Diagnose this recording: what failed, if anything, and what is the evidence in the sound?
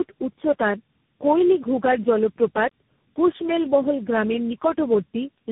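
The failure is at the codec stage: tandem speech coding runs through the whole speech clip. The sound suggests four speech coders in a row, AMR-NB at 6.7 kbit/s, GSM full rate, AMR-NB again and finally CVSD, joined by G.711 links. Each coder re-encodes the previous one's errors, so roughness and muffling compound. A spectrogram shows a hard ceiling at 3.8 kHz, with harmonics smeared and unsteady beneath it.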